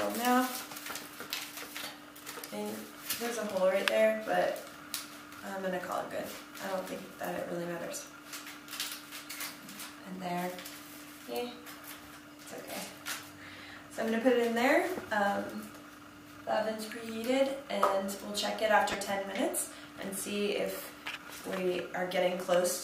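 Weak DAB reception let residual bit errors, roughly a fifth of a percent, slip past error correction into the MP2 data, garbling sub-band samples and scale factors. The result is DAB burbling from 18.92 to 18.94 s, a brief burst that fits two corrupted frames.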